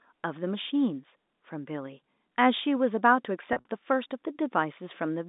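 Telephone-band speech with one fault, packet loss with pitch repetition, between 3.53 and 3.65 s. About 90 ms of audio goes missing across that 120 ms span, in runs of up to 50 ms. Each gap is filled by a repeated pitch period, giving a brief held, buzzy quality. The pattern fits roughly nine 10 ms packets dropped by the network. The G.711 A-law line band of 200 Hz to 3.7 kHz is audible throughout.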